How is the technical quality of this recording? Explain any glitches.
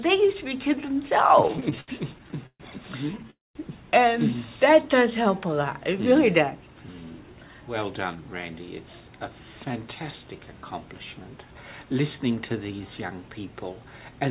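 The recording has three kinds of delivery glitch, all from a real-time call connection. The audio is also band-limited with nothing above 4 kHz, which points to a narrowband telephone codec such as G.711.

Repeated stalls (stutter) occur from 1.38 to 2.62 s, then more briefly from 3.08 to 3.30 s. Packets arrived late or too slowly, so the jitter buffer kept running dry, and the receiver stretched the last sound to cover each gap. In the first span, concealment fills about 29% of the time, with the longest hold at 132 ms. The second span's holds are tiny, 12 ms at most. Nothing is lost, but the sound drags and judders. Many short holds set this apart from a single freeze.

A call audio freeze follows directly, from 3.30 to 3.57 s. The likely cause is packets being held up long enough to empty the buffer completely. The held sound fades into about 190 ms of silence, and then the audio resumes where it stopped. 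This adds a 248 ms pause without losing anything. Unlike the stutter, it is one continuous break that decays to silence.

A jitter buffer speed-up runs from 6.11 to 8.23 s. After the delay built up, the receiver trimmed tiny pitch-period slices over and over to shrink the backlog. This removed roughly a fifth of a second and played the passage at 109% speed. The audio sounds hurried, but pitch is unchanged, which distinguishes it from a sample-rate or playback-speed error, where the pitch would rise too.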